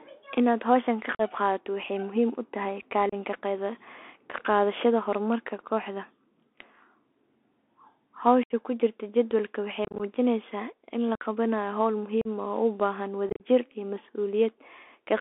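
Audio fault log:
throughout: Bluetooth CVSD headset codec. The link codes audio as one-bit up/down steps, which fits a 64 kbps CVSD link, so everything is squeezed into about 300 Hz to 3.5 kHz, with granular hiss and harsh, scratchy edges.
1.15–1.21 s, 3.09–3.14 s, 8.43–8.53 s, 9.85–10.01 s, 11.15–11.23 s, 12.21–12.27 s, 13.29–13.43 s: unconcealed Bluetooth headset packet loss. Lost radio packets go unreplaced, leaving abrupt holes of 45, 30, 67.5, 52.5 and 37.5 ms. The 3.09 s gap follows "muhiim u tahay", and the 8.43 s gap precedes "kujirta jadwalka waxey". The 9.85 s run, after "kujirta jadwalka waxey", scatters 90 ms of loss over 150 ms, and the 13.29 s run scatters 82.5 ms over 105 ms. Both sound chopped and crackly.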